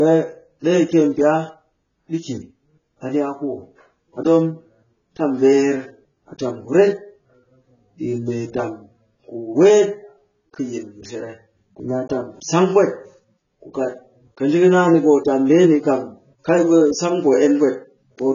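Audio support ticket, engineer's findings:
Speech dull and smeared throughout, fizzy warble on sibilants. Likely AAC compression at a very low rate, around 16 kbps: nothing above 7.1 kHz. Spectrogram shows a hard ceiling.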